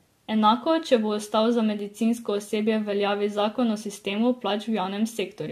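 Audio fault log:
throughout: generation loss. The speech has likely been through several rounds of lossy coding, roughly three encode and decode passes of an AAC-type codec at a rate that fits about 64 kbit/s. Each pass requantises the signal on a shifted frame grid, so its noise and spectral gaps stack on those of the last. The result sounds swirly and hollow, consonant attacks are smeared, and nothing is present above 14 kHz.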